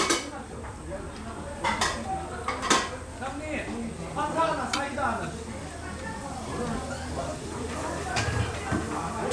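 No technical faults can be heard at any point in the audio.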